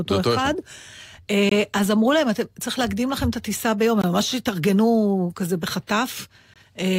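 Hard-edged 21 ms holes cut the speech at 1.49, 4.02 and 6.54 s, a gap between chunks where silence sits at each 2.5-second join.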